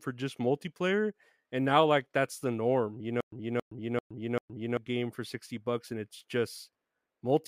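From 3.21 s to 4.77 s, right after "that's the norm you", the speech catches on a fragment of about 273 ms that plays four times, each repeat followed by about 118 ms of dead digital silence, so the burst returns every 391 ms before the audio resumes at "game for". This stutter with silent gaps likely comes from a stalled stream replaying its last buffered fragment at each retry and then running empty, and the speech that belonged in that span is gone.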